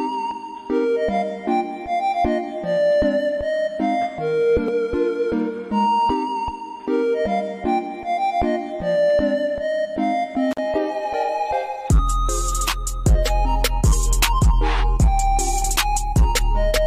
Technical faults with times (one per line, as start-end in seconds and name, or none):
10.51-10.58 intermittent contact